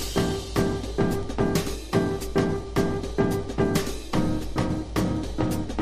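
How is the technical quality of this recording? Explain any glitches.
No glitches or technical faults are audible anywhere in the recording, so there is nothing to flag.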